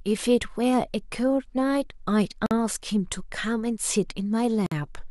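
At 2.46 s and again at 4.66 s the speech drops into brief silences, about 48 ms and 53 ms, with smeared edges, then resumes where it left off. Those are gaps at joins of encoded pieces, where untrimmed encoder delay and end padding got stitched in.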